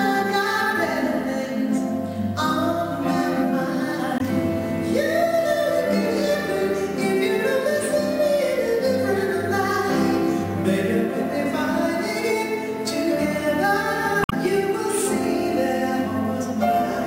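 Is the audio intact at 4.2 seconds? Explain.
No, there's a brief glitch right there, running from about 4.17 to 4.21 s, so roughly 44 ms. It's damaged data in a compressed stream: a patch of the encoded bytes at that point is corrupted, so the decoder misreads those frames, loses its place and has to hunt for the next valid frame header before it can carry on. What you hear is a quick chirp, squawk, click or short hole cutting into the audio for that instant.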